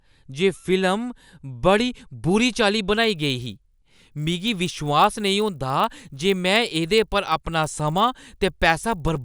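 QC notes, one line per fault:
2.96–9.25 s, resampler restarted on every block: from 2.96 s to the end, each 20 ms block is converted in isolation, so the filter sees silence or wrapped samples at every edge and leaves a small error there. With blocks this short, the errors merge into a 50 Hz buzz at the block rate, during a 24 kHz to 48 kHz conversion. Unlike mains hum, it drops out in pauses, since it exists only where signal crosses a block edge.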